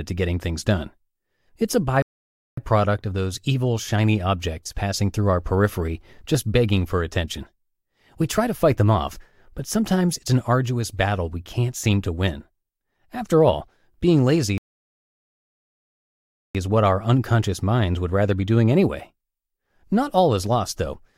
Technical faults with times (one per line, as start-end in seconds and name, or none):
2.02-2.57 rebuffering stall
14.58-16.55 rebuffering stall